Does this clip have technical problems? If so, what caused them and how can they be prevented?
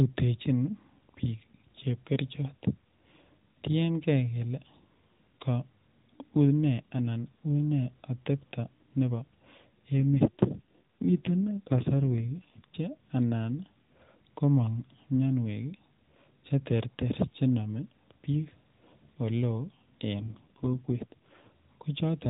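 Yes. There are two AMR rate drops, from 9.98 to 12.67 s and from 20.20 to 21.50 s. In both the speech turns rougher, buzzier and more synthetic. The bandwidth stays at the narrowband limit and there is no gap. The degradation suggests the link pushed the AMR encoder from roughly 12.2 kbps down to 4.75 kbps, spending bits on error protection instead. Improving radio coverage or signal strength on the call path prevents these drops.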